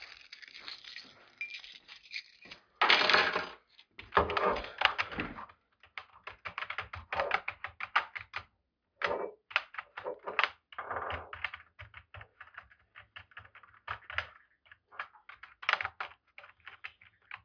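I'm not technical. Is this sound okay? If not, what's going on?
Yes, no technical faults are audible anywhere in this recording of sounds.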